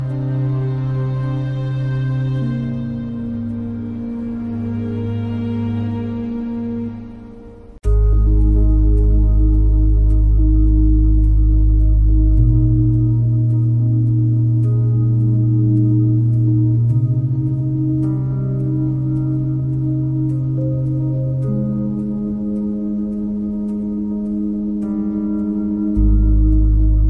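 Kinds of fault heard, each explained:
Nothing stood out on listening that would count as a technical fault.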